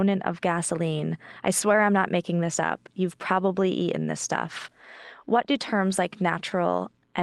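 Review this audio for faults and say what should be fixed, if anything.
Clock drift between sender and receiver runs through the whole recording. The sender's clock runs roughly 2% slow against the receiver's. The jitter buffer therefore drains steadily. To keep playing, the receiver has to stretch what it has. Fix the cause by locking both ends to a common clock or resampling at the receiver to match the sender's rate.

Repeated timing corrections are heard from 0.48 s to 7.00 s. They all go one way: the receiver repeats short pieces to fill the gap left by the slower sender. Playback ends up at about 98% speed, with something like 150 ms added over that stretch. The repeats are small and unevenly spaced. Any that are heard come across as slight hiccups or a wobbly tempo in the speech. The audio passed through an Opus call path with content up to about 12 kHz. These corrections sit on top of that. 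Prevent them with continuous drift compensation through smooth adaptive resampling instead of discrete repeat-and-cut edits.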